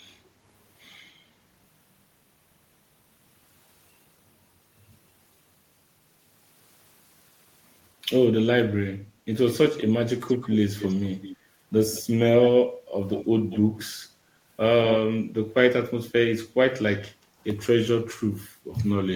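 A speech recording with three kinds of fault. Background gated by the echo canceller occurs at 9.02–9.25 s and again at 17.15–17.34 s. Each time the room tone sinks by about 8 dB for roughly a fifth of a second and then recovers, as the canceller pulls the microphone down while the far-end loudspeaker is active. On a spectrogram this shows as a brief faded band across the noise floor, and on the waveform as a short dip in the quiet floor.

A faint repeat of the speech trails it by 199 ms at 10.27–11.37 s, 11.94–12.04 s, 12.41–12.69 s and 13.12–14.05 s. It sits about 15 dB below the direct sound, and about 20 dB below in the shortest scrap. This is likely echo leak, where a far-end loudspeaker's output was not fully cancelled and was sent back. A spectrogram shows fainter copies of the harmonic patterns shifted right by a fifth of a second.

Loose connector crackle follows at 17.45–17.51 s. 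It is a short, irregular burst of scratching from a contact making and breaking. It appears as ragged vertical broadband streaks on the spectrogram and as jagged spikes on the waveform.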